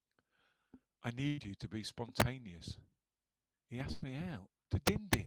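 At 1.27 to 1.40 s and again at 3.92 to 4.04 s there's a burst of packet loss: about 100 ms goes missing, filled by a held, fading continuation before the speech jumps ahead. Integer overflow hits at 2.20 s and from 4.87 to 5.14 s, where peaks about 3 dB and then 5 dB over the limit wrap to the opposite sign, giving harsh cracks far sharper than clipping.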